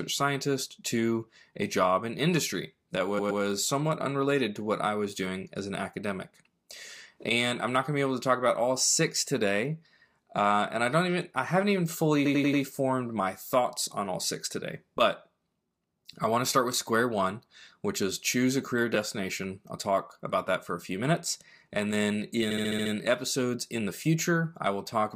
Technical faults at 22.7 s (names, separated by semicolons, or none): repeated frames